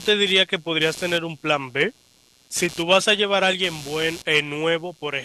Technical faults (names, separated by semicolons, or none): computer activity noise